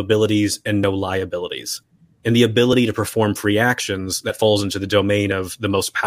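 The capture side likely fell behind the hardware at four moments, a dropped buffer (overrun), so unread samples were overwritten and the speech on either side was spliced straight together. At 0.84 s, 2.73 s and 5.32 s about 10 ms goes missing, heard as a jump. At 4.30 s the loss is nearer 40 ms, giving a longer skip forward, with no gap of silence anywhere.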